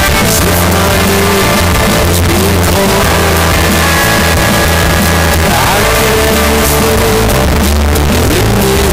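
The audio suffers from float read as integer for its whole length. Every sample sits at an almost fixed, high level, so the waveform is almost square. The result is extremely loud and harsh. Quiet background noise comes out as loud as the main sound, yet its pitch can still be followed. The likely cause is that 32-bit float samples were read as 32-bit integers. Each value then comes from the sign and exponent bits, not the true level.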